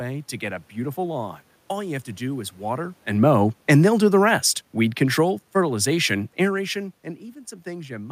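From 3.11 s, just after "to do is water", the automatic gain control reacts to input it judges too loud, or to background noise too strong for its starting gain, and lowers its gain gradually until about 6.8 s, by about 6 dB in total. The speech and the room noise behind it sink together over those seconds.

At 6.67 s a single sharp click cuts through, a brief discontinuity in the waveform. It is likely caused by dropped samples. The click is so short that it points to roughly one lost sample, and no sound goes missing.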